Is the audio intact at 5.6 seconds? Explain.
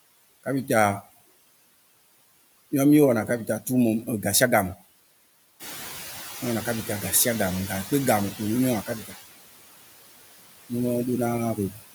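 No. The room noise jumps by about 10 dB just before 5.6 seconds. From 5.59 to 7.93 s the noise suppressor is catching up: its noise estimate lags the rise. At first it cuts only about 9 dB, so the louder noise comes through. Over about 2.3 s it then sinks. Noise suppressor artifacts are also present here and throughout the clip. Bands judged as steady noise are cut by about 18 dB frame by frame. This leaves the residue pumping between words.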